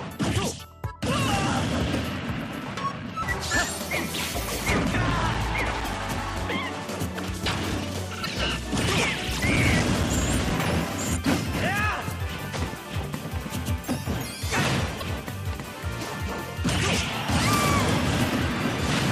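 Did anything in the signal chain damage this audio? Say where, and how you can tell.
Yes, at two stages. During playback from the disc, there is a run of short, evenly spaced ticks, each only a few milliseconds long, from 3.94 to 6.87 s (14 ticks) and again from 9.10 to 10.96 s (9 ticks). Both runs repeat at close to five per second, locked to disc rotation. These are CD scratch ticks: once per turn a blemish destroys more data than error correction can rebuild, and the player conceals the gap.

In the compressed file or stream, there are four brief glitches at 5.84–5.88 s, 8.22–8.26 s, 11.24 s and 14.98–15.03 s. None is regular, and the one at 5.84 s lands inside the first tick run. That points to damaged data in a compressed stream: corrupted bytes make the decoder misread or reject a frame, lose sync, and recover only at the next frame header.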